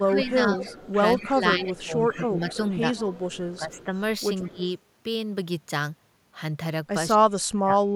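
From 0.0 to 3.85 s there is an echo leak. A faint copy of the speech trails the original by 175 ms. It sits roughly 20 dB below the direct sound. The likely cause is a speakerphone on the far side whose echo canceller let some of its loudspeaker's output back into its microphone. That leftover was sent back down the line.

Over the same stretch, the speech is suppressed in double talk. The level dips by about 10 dB at 0.03 to 0.6 s, at 1.17 to 2.86 s, and at 3.58 to 3.93 s. The speech sounds pushed back and thinned in pieces. This likely happens because the canceller hears both sides at once. It cannot tell the talker from the echo, so it turns both down.

A brief echo scrap returns at 4.42 to 4.49 s. It is quieter, roughly 30 dB down, with the same 175 ms delay. Right after it, from 4.49 to 4.65 s, the speech drops by about 15 dB.

The deepest cut comes at 7.15 to 7.79 s. There the level falls by around 30 dB, nearly removing the speech.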